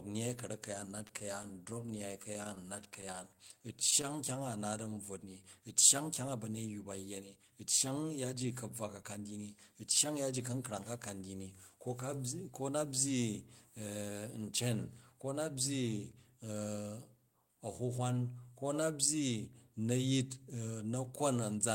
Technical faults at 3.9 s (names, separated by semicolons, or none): repeated stalls (stutter)